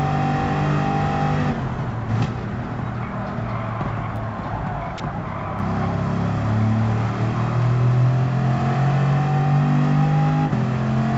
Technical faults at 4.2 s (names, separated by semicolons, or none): repeated buffer